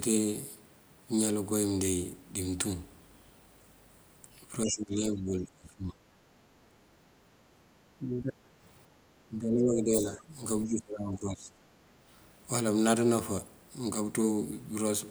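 From 4.65 to 5.98 s the speech sinks, dropping by something like 25 dB at its worst, and it does the same at 7.98–8.33 s, 9.28–10.37 s and 10.66–11.54 s, with the middle two shallower at around 15 dB. That pattern is most likely speech suppressed in double talk: with both ends talking, the echo canceller can't separate the local talker from the loudspeaker echo and turns everything down together.

Between those, at 6.26–6.84 s, the room background dips by about 7 dB for roughly half a second and then comes back. That's background gated by the echo canceller: while the far end plays through the loudspeaker, the canceller clamps the microphone down and lets go once it decides the echo has passed.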